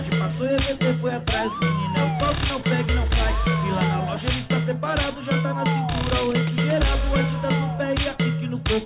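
No technical faults can be heard anywhere in this audio.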